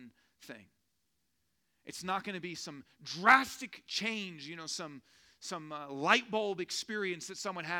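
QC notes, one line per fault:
No faults were found in this speech recording, and no technical problem stands out in the signal.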